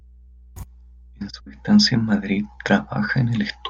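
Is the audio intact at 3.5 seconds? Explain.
No. At 3.5 seconds three related problems are present together, and none of them stops before that point.

Mains hum runs through the whole clip as a steady 60 Hz tone, sitting roughly 25 dB below the speech, with some low harmonics. A ground loop or nearby transformer is leaking the power line into the signal. Broadband low-frequency rumble wanders in level and spectrum, but this hum holds one fixed pitch that never changes with the speech, and that constancy marks it as mains pickup.

Clock drift between sender and receiver is also present throughout. The sender's audio clock runs about 2% slower than the receiver's, so the jitter buffer keeps draining and the receiver must pad the stream to avoid running dry. Packet loss leaves clear gaps or garbled bursts. Here the result is instead a scatter of small, unevenly spaced timing hiccups spread across the entire clip, because the mismatch is continuous rather than tied to isolated network events.

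The visible result at 3.5 seconds is the repeated timing corrections, which run from 0.28 s to the end of the clip. The receiver repeatedly inserts short repeated slices, stretching playback to about 99% speed and adding around 70 ms in total. Every edit lengthens the audio and none removes material. If heard at all, they register as slight stutters and an uneven tempo. Wow or flutter bends pitch, but these corrections leave pitch untouched and disturb only timing.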